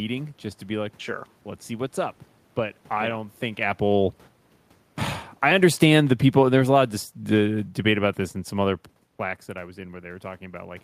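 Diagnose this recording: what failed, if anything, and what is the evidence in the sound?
Automatic gain falling is the fault, in the call-processing stage. From 5.28 s to 8.85 s the level slides down by about 6 dB, and the room noise sinks along with the speech. That shared drop shows the gain control is at work, not the talker. The control judged the input too loud or its background noise too strong, and eased its gain down over those few seconds. The level shifts near 3.5 s and 9 s are the talker moving, with the background staying put.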